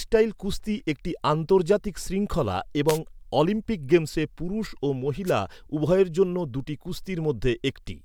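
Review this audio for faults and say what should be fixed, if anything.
Two wireless microphone noise hits occur, at 2.87–2.99 s and 5.25–5.32 s, each a brief swish of static over the speech. The analogue FM radio link fades as reflected signals cancel, letting receiver noise surface. Use diversity receivers and keep clear line of sight between transmitter and receiver antennas.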